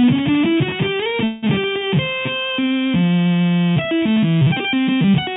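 From 1.24 to 1.44 s there is a call audio freeze. The sound does not drop out. Instead, the last moment before 1.24 s is held and continued as a buzz or hiss that fades over about 184 ms, without reaching silence. When playback resumes it continues from exactly where it stopped, so nothing is lost; the clip has a gap inserted and everything after it runs about 184 ms late. This is likely packets delayed in transit, emptying the jitter buffer on the G.711 mu-law call path while the receiver concealed the wait.

From 3.69 s to the end of the clip there is a time-stretched section. Here the audio is squeezed to run at 1.78 times its original pace, while the pitch stays where it was. The change is abrupt, and the final stretch sounds rushed against what precedes it. This is likely software shortening the audio to fit a set length, holding pitch by discarding short slices of the signal instead of resampling it.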